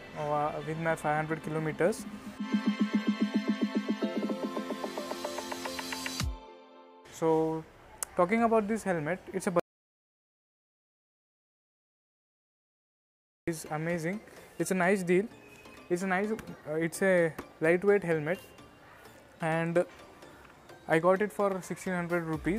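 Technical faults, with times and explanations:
9.60 to 13.48 s, audio dropout to silence: the sound stops abruptly in mid-flow and about 3.9 s of silence follows, with no room tone or noise floor at all, before the audio resumes just as suddenly. That total absence of background points to the input signal being lost, likely through a disconnected device, a failed link or an unintended mute, while the recorder kept writing silence. Whatever occurred during that gap is not recoverable.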